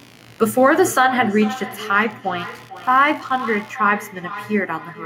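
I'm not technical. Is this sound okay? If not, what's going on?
No. Two separate problems can be heard.

Throughout the whole clip there is computer activity noise: a faint, fast buzzing, pulsing roughly seventy times a second, sitting well below the speech. It comes from the computer itself. As the processor, graphics card or mouse change how much power they draw, the electrical ground shared with the audio circuit shifts, and that electrical disturbance leaks into the recording as a buzz.

From about 0.57 s to the end there is feedback echo between two devices. Each piece of speech comes back a little under half a second later, quieter than the original and thinner in tone. This happens when two devices in the same room join one call. One plays the other's sound aloud, and the other's microphone picks it up and sends it round again. Each device's echo canceller only removes its own playback, so the loop goes uncorrected.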